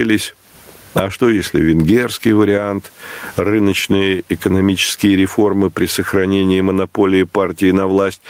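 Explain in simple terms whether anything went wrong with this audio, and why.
Something did go wrong: the recording has gain pumping from start to finish. The likely cause is a microphone level set far too high, with a fast automatic limiter yanking the volume down on every loud sound and letting it rise again in the gaps. The result is speech that sounds squashed, with loud and soft parts pressed unnaturally close together.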